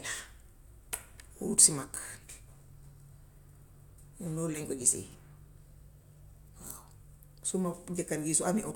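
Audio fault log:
No faults detected.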